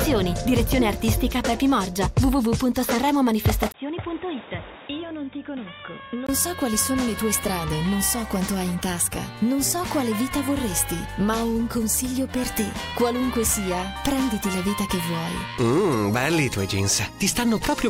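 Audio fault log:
3.72 to 6.29 s: input switched to a poorer device. A gap of about 20 ms opens at 3.72 s. After it, the sound turns dull and boxy, with nothing above 3.8 kHz. The level drops by roughly 10 dB, and a new, faint noise floor appears well below the signal. At 6.29 s the full band, level and tone return. The cause is likely a change of capture device, such as a headset call profile, whose narrower band and own noise replace the original input.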